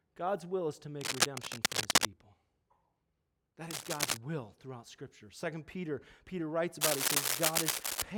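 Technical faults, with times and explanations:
1.01–2.15 s, 3.71–4.17 s and 6.81–8.03 s: cable scratch noise. Dense, uneven scratching and rustling covers the speech after "will is to", before "will throughout", and near the end, level with or slightly above it, likely from a worn cable or connector moving and rapidly changing contact resistance.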